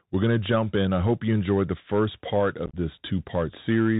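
The whole recording runs through the Bluetooth CVSD headset codec. Everything above 4 kHz is gone, so the speech sounds thin and boxed in. The damage is plainly audible. Each sample is coded as a single up-or-down step, and the step size must keep adapting. Loud, bright sounds move faster than it can follow, so they distort. S sounds come out scratchy. A fine granular hiss sits under the speech. The sound fits a 64 kbps CVSD link.

From 2.66 to 2.74 s, just after "enjoyed the first part", there is unconcealed Bluetooth headset packet loss. Short voice packets between headset and phone were lost. Nothing patched the gaps. Silence or an idle pattern filled them instead. About 56 ms of audio is missing, scattered across 75 ms, and the longest hole is about 26 ms. Roughly fifteen packets went missing. The speech breaks up into rough, chopped crackle with abrupt edges. It comes back briefly quieter.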